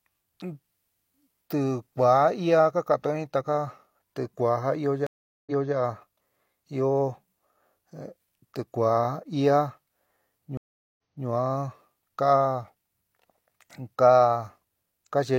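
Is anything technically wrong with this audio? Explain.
Yes. There are two stream reconnects, at 5.07 to 5.74 s and at 10.57 to 11.26 s. Each time the connection dropped, playback went silent for about 0.4 s, and a fresh decoder picked the stream up again. The server resent a burst, so the audio resumes 0.28 s earlier than where it broke off, and that stretch of speech is heard twice. On a waveform each event is a flat gap followed by a repeated segment. A spectrogram shows a blank vertical band, then a pattern duplicated from just before it.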